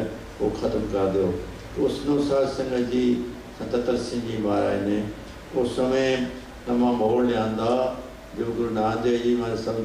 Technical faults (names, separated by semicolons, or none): low bit depth without dither